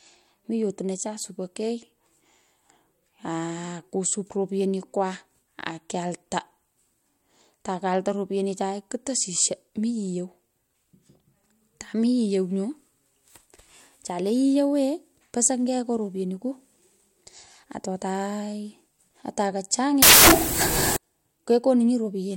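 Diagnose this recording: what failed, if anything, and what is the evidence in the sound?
The failure is in sample-format conversion: samples built from the wrong bytes. From 20.02 to 20.96 s the speech suddenly gives way to loud, harsh broadband noise for just under a second. That's the reader misassembling each sample, being off by a byte or swapping byte order, so the jittery low-order bits end up driving the loudest part of every value.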